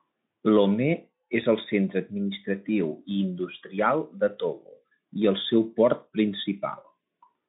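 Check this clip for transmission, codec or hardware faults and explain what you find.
No faults turn up in this clip.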